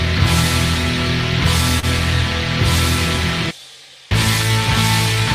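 A short concealed packet loss occurs from 1.79 to 1.85 s. About 40 ms of audio failed to arrive at the decoder in time, and the receiver bridged roughly 31 ms of that gap by extending the preceding sound, repeating its periodic structure or substituting shaped noise, before crossfading back into the real stream. The result is a brief smeared or wobbly patch.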